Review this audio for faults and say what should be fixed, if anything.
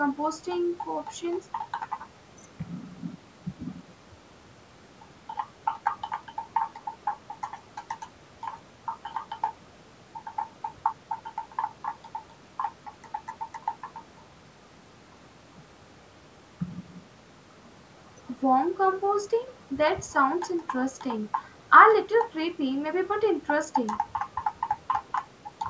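Nothing needs fixing; no faults were found.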